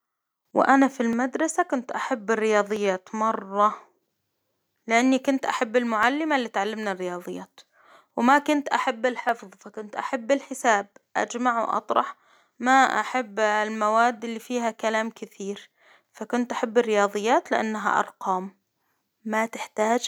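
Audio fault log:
1.13 to 19.09 s, clock drift buffer slips: a click or pop recurs about every 1.63 s across this whole span, roughly ten in all, with the first landing just after "وأنا في". The steady spacing likely comes from two devices running on separate clocks, mismatched by something like 400 ppm. The buffer between them slowly drifts until a few dozen samples get dropped or repeated, and each of those tiny jumps in the speech waveform is heard as the tick.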